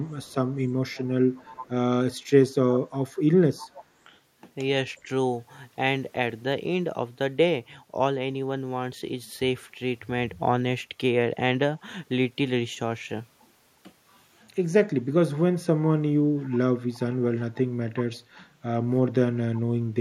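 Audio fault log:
0–0.35, 0.52–1.06, 1.3–1.69, 2.69–2.8, 3.59–3.85, 4.96–5.01 and 16.93–16.99 s: echo leak. A copy of the speech trails 365 ms behind, about 35 to 15 dB below it, likely from a loudspeaker echo the far end's canceller failed to remove.
5.03–5.08 s: speech suppressed in double talk. The talker's level dips by about 5 dB for 50 ms, likely because an echo canceller mistook overlapping speech for echo and attenuated it.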